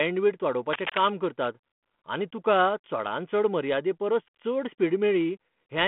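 A burst of dense, uneven scratching and rustling runs over the speech from 0.73 to 1.1 s, nearly as loud as the voice itself, heard through a telephone band of roughly 150 Hz to 3.4 kHz that fits a 32 kbit/s G.726 ADPCM link. This is cable scratch noise, likely from a worn cable, connector or control being moved, so that its contact resistance jumps erratically for that moment and injects crackling noise into the signal.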